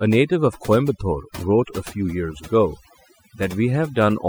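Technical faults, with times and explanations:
Throughout: overdone noise removal. A noise reduction stage has been pushed too hard on a noisy speech recording. Each frequency band that sits close to the estimated noise level gets pulled far down or shut off entirely. Softer parts of the voice fall below that line and vanish along with the noise. The gaps between phrases drop to near silence, sprinkled with twinkling specks.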